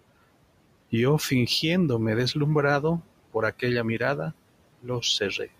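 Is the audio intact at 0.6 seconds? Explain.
No. At 0.6 s, as throughout the clip, noise suppressor artifacts are present: the suppressor pulls the room noise down by about 18 dB between words and lets it swell back under the speech. Unlike a gate, it never cuts to silence.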